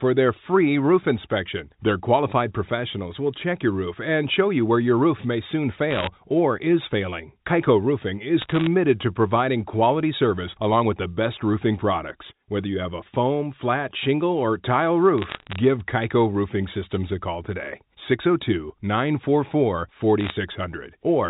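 At 5.91 to 6.07 s, just after "your roof may soon", you get a quick burst of sharp ticks and crackle. That's bit errors on a digital phone line. It happens again at 8.42 to 8.67 s, right before "to providing quality service", at 15.18 to 15.56 s, after "flat shingle or tile", and at 20.21 to 20.31 s. A small fraction of bits, well under one percent, got flipped in the G.711 stream, so individual samples jump, and the ones hitting sign or high bits give those clicks over the speech.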